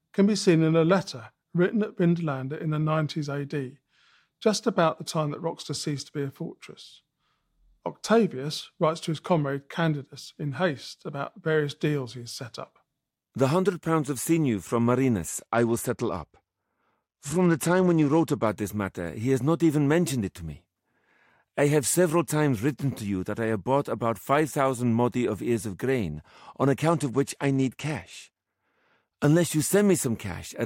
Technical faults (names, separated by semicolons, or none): Bluetooth SBC bit pool drop